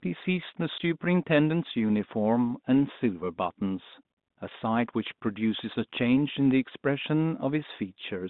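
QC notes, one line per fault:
0.78 s, packet loss filled with silence: one 20 ms packet is missing. Silence fills the gap, leaving a brief hole with hard edges.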